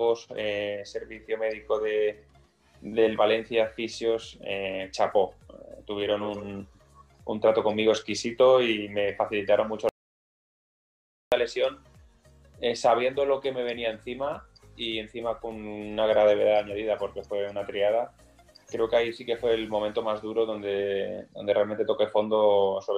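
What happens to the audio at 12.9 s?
Nothing goes wrong at 12.9 s; the audio runs through that moment intact, with no dropout, click, distortion or glitch.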